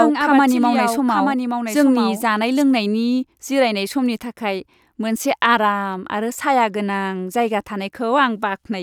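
From the very start until 2.62 s, the speech is accompanied by a doubled audio track: a second, full-band copy trailing about a second behind and a few decibels quieter, with no reverberant tail, then cutting off abruptly. The likely cause is the signal being captured again through a slower path, or an edit holding two copies out of step. A spectrogram shows the same speech pattern repeated, shifted about one second to the right.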